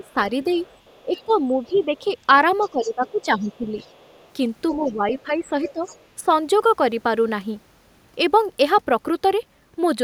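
An echo canceller that likely could not tell the talker from loudspeaker echo during double talk turned both down, so speech is suppressed in double talk from 0.0 to 2.05 s and 2.7 to 3.72 s. The speech dips by up to about 15 dB, for roughly 0.7 s in each stretch. The same canceller likely failed to remove all of the loudspeaker signal, so the other side's voice leaks through faintly from 0.06 to 4.28 s, about 30 dB below the speech. From 4.74 to 6.28 s the speech is suppressed again, dropping up to about 10 dB for roughly a second in all. Overlapping that, from 4.87 to 6.06 s, the leaked far-end voice returns more clearly, about 20 dB under the talker.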